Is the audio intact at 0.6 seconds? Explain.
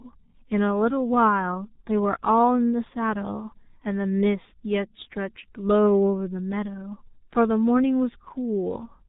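No. At 0.6 s the speech is under G.723.1 codec damage, present throughout the clip. Its coarse 30 ms frames at about 6.3 kbit/s cut everything above 4 kHz, leaving the voice muffled, hoarse and smeared at consonants.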